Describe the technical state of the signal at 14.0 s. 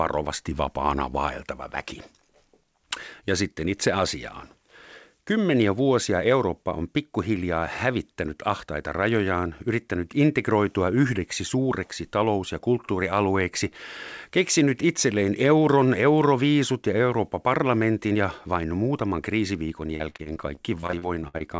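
At 14.0 s the speech signal is intact, with no dropout, glitch or other fault, and only the ordinary band-limited character of the wideband call path, with nothing above about 8 kHz.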